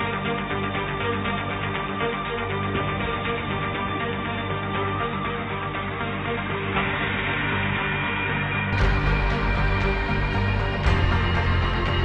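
From the start until 8.73 s, the audio is band-limited and dull, with nothing above 3.8 kHz. It also sits around 5 dB quieter and carries its own background noise, far below the signal. At 8.73 s the full bandwidth returns at once, with no gap at the change. The likely cause is an input switched to a poorer device, such as another microphone or a headset's call profile, before the system returned to the better input.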